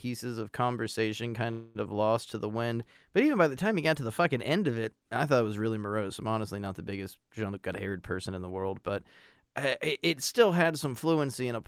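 At 1.51 s the audio hangs for about a quarter second, up to 1.77 s: a call audio freeze. The last bit of sound gets stretched into a fading buzz or hiss, likely because packets stalled and the jitter buffer ran dry. Then it picks up right where it stopped, with nothing lost, just pushed later.

From 7.49 to 8.91 s there's a jitter buffer speed-up. The receiver is trimming tiny pitch-period slices, about a fifth of a second in total, to catch up on delay, so the speech runs at 116% speed at unchanged pitch and sounds hurried.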